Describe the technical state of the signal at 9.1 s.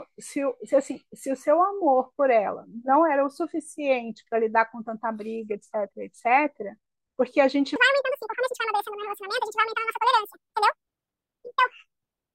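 At 9.1 s the audio sits inside a section at the wrong speed, running from 7.76 s through to the end of the clip. The likely cause is that this part was played back against the wrong clock, so samples go out about 1.91 times faster than they were captured. Because speed and pitch are tied together here, the speech becomes hurried and squeezed, and everything rises by about ten semitones, giving it a thin, chipmunk-like quality.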